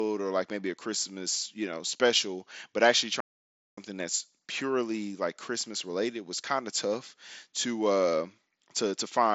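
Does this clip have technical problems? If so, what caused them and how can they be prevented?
Yes. A playback stall cuts the speech from 3.20 s to 3.78 s, a silence of about 570 ms before it resumes on "that's purely like". The player most likely ran short of buffered data or had its thread blocked, so nothing reached the output until it caught up. On a waveform this is a flat line across that gap; on a spectrogram it is a full-height blank column through the headset's band, which tops out near 8 kHz. A larger playback buffer and a high-priority audio thread would prevent it.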